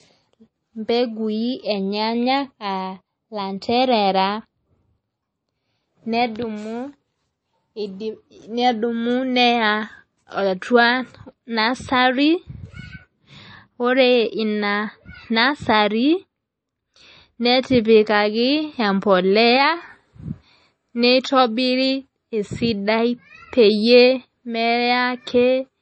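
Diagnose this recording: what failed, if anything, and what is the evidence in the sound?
Throughout the speech, nothing sits above 8.3 kHz, and a plainly audible watery swirl and smeared consonant attacks point to the codec stage, likely MP3 compression, fitting a bitrate near 32 kbps. A plain low-pass filter would dull the treble without this warbling.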